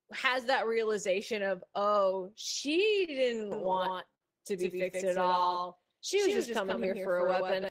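At 3.05 s a packet arrived late and the jitter buffer ran dry, a short stall from a late packet. The receiver held the last sound for about 30 ms until the packet came, so one sound drags briefly but nothing is lost. From 3.52 s to the end of the clip, a doubled audio track appears. A second, slower capture path or an out-of-step edit likely mixed in a full-band copy of the speech roughly 150 ms behind and about 5 dB quieter. It has no room colour and starts abruptly. A second late-packet stall at 4.15 to 4.23 s holds a sound for about 58 ms. Between 5.15 and 6.14 s, a jitter buffer slow-down builds reserve by repeating pitch periods. The speech plays at 94% speed at unchanged pitch, adding 66 ms and drawing sounds out.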